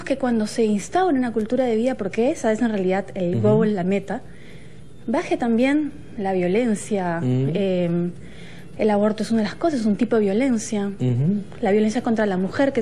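No technical faults can be heard in the audio, so there is nothing to describe in time order.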